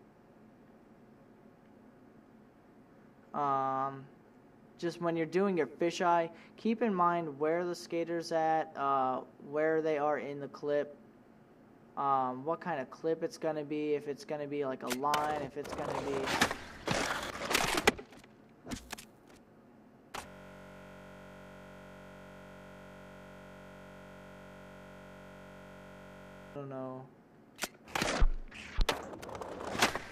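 From 20.27 to 26.56 s the audio freezes into a steady 46.9 Hz buzz, a system hang loop: a 21.33 ms slice, fitting a 1024-sample buffer, repeats 295 times while the system stalls.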